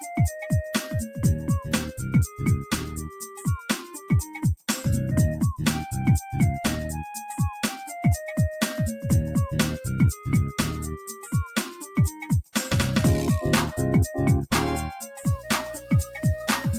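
From 15.23 s to the end, a video or display buzz intrudes: a screen or video cable is coupling its 60 Hz field rate into the audio, heard as a rasping buzz with hash above it, sitting roughly 15 dB under the sound. Unlike smooth mains hum, it is edgy and spiky.

Between 15.8 and 16.18 s, the noise suppressor cuts sound it mistook for noise, pulling it down by as much as about 7 dB for around a fifth of a second. Steady or fading parts sink and their decays shorten, but the sound never vanishes outright as in a dropout.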